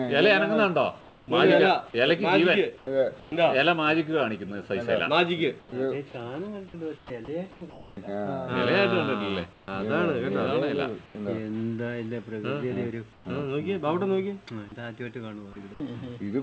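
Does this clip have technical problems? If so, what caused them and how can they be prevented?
Yes. Comfort noise in place of the background appears at 1.01–1.28, 2.78–3.32, 5.60–5.72, 6.98–7.97, 9.53–9.68, 11.06–11.15 and 13.13–13.25 s. The real background gives way to a smooth, featureless hiss, level or up to about 4 dB quieter. This is likely from discontinuous transmission filling pauses with synthetic noise. A noise gate would leave near-silence instead. Disabling DTX on the sender prevents it.

An onset clipped by the voice detector occurs at 7.05 s. About 50 ms of the start is missing, so the sound begins abruptly out of the comfort-noise stretch. Because the loss sits only at the onset, it differs from a mid-sound dropout. The sender's voice detector reacting late is the probable cause. A lower detection threshold or lookahead would prevent it.

The call path's bandwidth, with nothing above 8 kHz, fits G.722 at 64 kbps.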